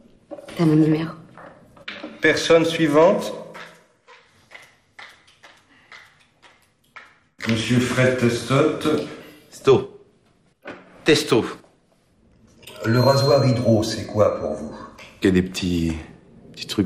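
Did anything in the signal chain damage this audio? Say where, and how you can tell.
Yes, at the codec stage, likely MP2 compression running short of bits. Throughout, the top end is dull and flickers in and out, with a gurgling, granular grit. Layer II shuts off upper sub-bands and coarsely quantises the rest, which fits a rate around 80 kbps.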